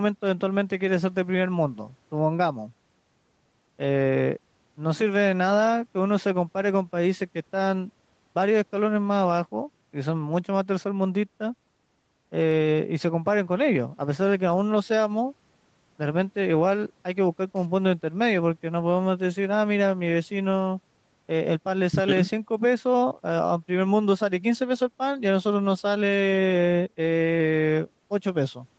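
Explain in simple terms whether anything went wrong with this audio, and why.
Nothing went wrong here: the speech sounds like an ordinary call, passing through the usual microphone processing and a call codec that keeps the sound below 8 kHz, so its slightly narrower, phone-like character is simply how calls are carried rather than a problem.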